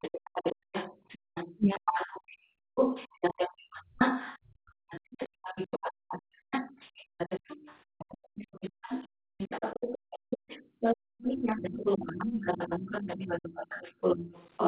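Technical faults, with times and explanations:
Throughout, other side's voice leaking through: A second voice sits under the talker for the whole clip, only a little quieter than the main speech. The likely cause is the loudspeaker feeding the microphone, with the echo canceller leaving much of that echo in.
0.56 to 11.18 s, background gated by the echo canceller: The room sound repeatedly dips and drops away, by as much as about 40 dB, around four seconds in all. The canceller clamped the microphone while the loudspeaker played, then released it, so the background returns.
1.59 to 1.91 s, speech suppressed in double talk: The talker's own voice dips sharply, very deeply, for about a third of a second. Both sides were likely talking at once, and the canceller could not tell its talker from the echo, so it pushed both down.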